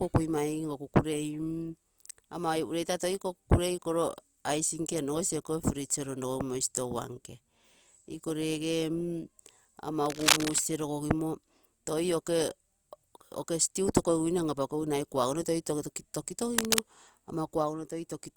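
A dense, uneven scratching and rustling rides over the speech from 10.06 to 10.59 s and again from 16.55 to 16.80 s, roughly as loud as the speech itself. This is cable scratch noise, likely from a worn cable or connector whose contact resistance jumped as it moved.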